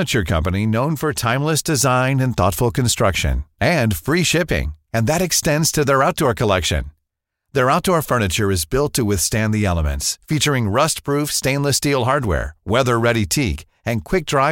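No technical faults can be heard anywhere in the recording.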